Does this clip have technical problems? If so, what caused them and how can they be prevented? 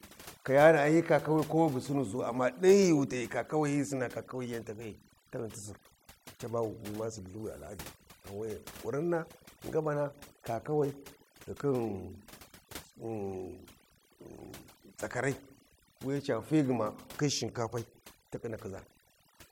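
Yes. Overdone noise removal runs throughout this speech: a noise reduction tool set far too strong pulls down any frequency band near its noise estimate, taking quiet speech detail too, so pauses collapse into near silence with twinkling specks. Prevent it by using gentler reduction settings.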